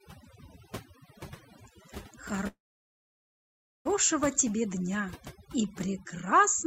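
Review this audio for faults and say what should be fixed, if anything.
Overdone noise removal runs through the whole speech clip. The suppressor's been pushed so hard that it's knocking individual frequency bands right down whenever they sit near its noise estimate, and the quieter parts of the voice get caught in that too. You end up with a background that drops and breaks up into little twinkling specks. To prevent it, back the reduction strength off and let a touch of natural room noise stay.

There's a call audio freeze from about 2.47 s to 3.87 s. The sound stretches on briefly and then drops to silence for roughly 1.3 s, filling about 1.4 s in total. When the audio resumes it picks up exactly where it stopped, so nothing's lost, but everything after is pushed about 1.4 s late. That's likely packets stalling on the network until the jitter buffer ran dry. To prevent it, give the call a steadier connection or a deeper jitter buffer.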